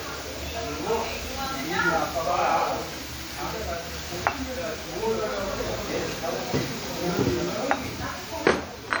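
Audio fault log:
throughout, WMA compression: the sound rings and smears, with a washy hiss that swells and fades along with the signal, plainly audible across the clip. This points to a likely cause of WMA 1 encoding at around 48 kbps, where long transform blocks spread quantisation noise over tens of milliseconds and weak components get zeroed. On a spectrogram, energy reaches about 20.1 kHz but looks patchy, with gaps and blurred, smeared onsets.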